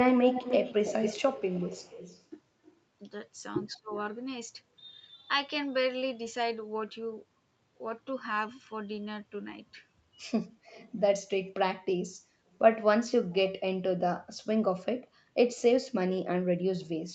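Right from the start, 0.06 to 2.25 s, there's a strong echo leak: a delayed copy of the speech trailing the original by about 241 ms, and it's loud, only around 5 dB under the direct speech. It's most likely a far-end loudspeaker whose echo canceller didn't scrub what its mic picked up, so the sound got sent back. A faint scrap of the same echo pops up again at 2.66 to 2.72 s, way down in level.

At 3.75 to 3.94 s the speech dips hard, by roughly 25 dB at its deepest, for about 200 ms. That's speech suppressed in double talk: with both ends active, the canceller likely couldn't tell its own talker from the returning echo and ducked everything. Right on its heels, 3.92 to 4.03 s, a moderate echo fragment slips through, about 20 dB down.

Later the echo leak comes back as brief, quiet bits at 10.67 to 10.93 s, roughly 25 dB under the speech, and at 12.53 to 12.58 s, barely there at all. Both carry the same 241 ms lag.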